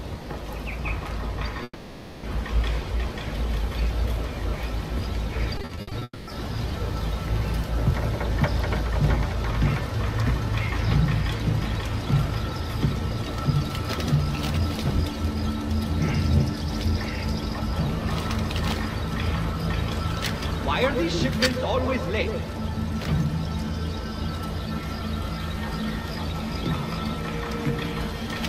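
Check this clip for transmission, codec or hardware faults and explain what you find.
Two kinds of transmission fault are audible, both from audio that never reached the receiver.

Long network dropout, 1.63 to 2.25 s and again 6.03 to 6.29 s: the sound is stretched into a fading buzz for about 0.6 s and 0.24 s, then goes briefly silent, likely because packets stopped arriving entirely. The missing stretch of audio is simply gone when playback resumes.

Repeated packet loss (robotic sound), 5.57 to 6.03 s: seven short gaps, the longest 60 ms, are each patched by extending the last sound. This conceals 43% of the span and leaves it choppy with pieces missing.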